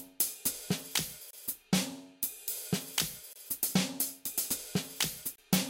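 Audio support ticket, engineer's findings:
Gap between chunks. Hard-edged silent holes of about 25 ms at 1.31–1.33 s, 3.33–3.36 s and 5.36–5.38 s, repeating every 2.0 s. Chunked delivery or playback: silence is inserted at each chunk join. No sound is lost; the sound is interrupted.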